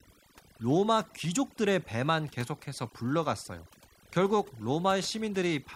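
From the first moment to the last, the speech carries the marks of overdone noise removal. A noise reduction stage set far too aggressively has carved away individual frequency bands wherever they sat close to its noise estimate, taking the softer parts of the voice along with the background noise. The pauses drop to near silence dotted with twinkling, chirpy specks. On a spectrogram the background shows as dark, empty regions sprinkled with isolated bright dots, and the harmonics look ragged and patchy instead of continuous.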